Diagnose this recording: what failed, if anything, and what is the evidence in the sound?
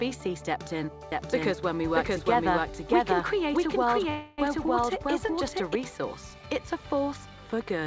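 Playback or capture stage, doubled audio track: from 1.12 to 5.75 s a dry, full-band copy runs roughly 0.7 s behind at similar level, likely from a second slower capture path.

Network and jitter buffer stage, call audio freeze: at 4.10 to 4.40 s the sound holds as a fading buzz or hiss for 280 ms, then resumes where it stopped, likely after delayed packets.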